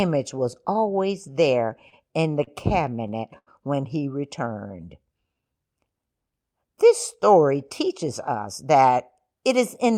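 Speech with jitter buffer timing faults. Repeated stalls (stutter) follow "was always there" at 1.79 to 2.49 s, then return from 2.85 to 3.49 s before "when he." Late packets emptied the buffer six times in each span, so the last sound was stretched to fill 95 ms and then 138 ms. The longest gap was 85 ms, and nothing is lost. A jitter buffer slow-down runs from 4.27 to 5.54 s, after "when he." Repeated pitch periods add 151 ms, so the speech plays at 89% speed with unchanged pitch. A jitter buffer speed-up from 7.51 to 9.91 s trims roughly 150 ms of pitch periods. The speech runs at 106% speed and sounds slightly hurried.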